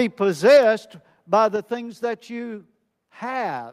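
From 0.48 to 0.57 s the loudest stretch of speech turns harsh and crackly, with a gritty, flattened edge on the peaks. This is microphone overload. The input was likely driven about 3 dB past what the converter could represent, so the tops of the waveform were sheared off flat, with about a tenth of the samples in that span clipped. The squared-off peaks add the buzzy distortion heard there.

Right after that burst, at 0.57 s, the speech and the background behind it both drop abruptly by about 3 dB. A second, similar drop of about 4 dB follows at 1.56 s. These are microphone volume step-downs: the calling software likely reacted to the overloaded input by cutting the device's input gain in a single jump. Because the change happens at the source, everything the microphone picks up falls together, in two audible steps.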